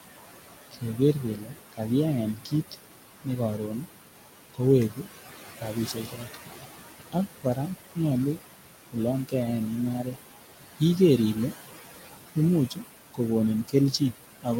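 The whole clip carries noise suppressor artifacts: the suppressor is pulling what it reads as steady noise down by about 16 dB frame by frame, so the room noise, which sits only about 11 dB under the speech, drops away in the gaps and comes back up under the talking.

On top of that there's speech cut by the noise suppressor, where it mistakes the quieter parts of the speech for noise and turns them down along with the background. It happens at 0.71 to 1.8 s, 2.35 to 3.88 s, 4.54 to 5.07 s, 5.61 to 6.37 s, 7.12 to 9.34 s, 10.03 to 10.81 s, and from 12.35 s through to the end. The drops run about 15 to 19 dB deep, the biggest ones at 7.12 s, 10.03 s and 12.35 s. In each of the first six stretches only a few hundred milliseconds or less actually get hit, and the speech caught in them sounds faint or swallowed.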